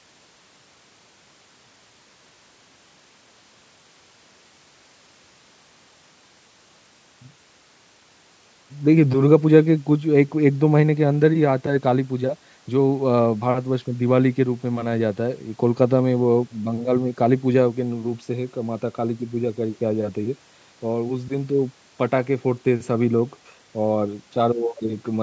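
No technical faults are audible.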